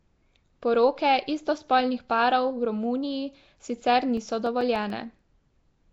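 Throughout the speech, the sound points to Nellymoser compression, likely the Flash-era Asao codec at a rate that fits 32 kbps. Its fixed, coarse bit budget starves weaker bands, which are replaced with noise, so voices carry a rough, hissy, watery smear and nothing survives above 7.7 kHz.

From 4.03 to 5.19 s, a damaged disc region overwhelms the player's error correction once per revolution, producing CD scratch ticks: nine brief clicks, each lasting only a few milliseconds, repeating at roughly eight per second before stopping.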